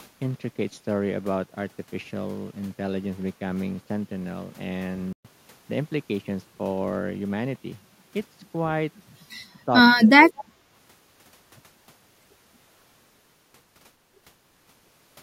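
At 5.13 to 5.25 s the speech stops dead for 120 ms, a playback stall, likely the player running short of data before resuming. From 9.67 to 9.71 s, and more deeply from 10.02 to 10.66 s, the voice dips by up to roughly 30 dB, likely speech suppressed in double talk by the echo canceller. Inside that stretch, at 10.37 to 10.44 s, a faint copy delayed by 228 ms sits far below the voice, a brief echo leak likely slipping past the canceller.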